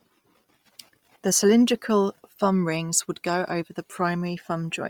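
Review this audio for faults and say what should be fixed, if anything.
Across the whole speech clip the upper range sounds breathy and grainy, with a noisy fizz replacing real detail, though content reaches about 23.1 kHz. This is likely heavy Bluetooth LC3 compression, consistent with around 32 kbps at 10 ms frames, zeroing the treble and filling it with noise. To prevent it, record over a wired path or raise the LC3 bitrate on the Bluetooth link.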